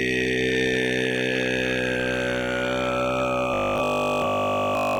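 From about 3.54 s to the end at 4.99 s the sound turns into a rigid, metallic 50 Hz buzz: robotic sound from repeated short buffers. Likely the audio arrived too seldom, so the player kept looping the last 20 ms and skipped nearly all the real material, forcing that fixed pitch.

Right inside that stretch, at 4.25 s, there's a tiny skip from an overlap between stream segments. Two segments' timestamps collide, which fits 6-second segments, and the player trims away a few milliseconds that weren't actually duplicated, so the waveform jumps.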